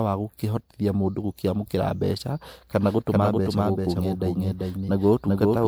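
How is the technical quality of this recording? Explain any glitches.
The recording has two clear technical problems: a smeared, degraded texture across the whole clip and a duplicated copy of the speech during the second half.

Generation loss runs from start to finish. The speech sounds swirly and hollow, with blurred consonant attacks and a watery shimmer. The likely cause is repeated lossy re-encoding, roughly four passes, in a way that fits 128 kbit/s MP3. Each decode and re-encode quantises the signal again on a shifted frame grid, so the noise and spectral gaps pile up. That leaves the audio worse than a single encode at that rate would.

A doubled audio track starts abruptly at 2.76 s and continues to the end. A second full-band copy of the speech trails the original by around 400 ms at about 5 dB lower, with no reverb tail or room colouring. It therefore sounds like a dry, stuttering overlap rather than an echo. 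This most likely comes from the same audio being mixed in twice, either through a slower second capture path or an edit that left two misaligned copies stacked together.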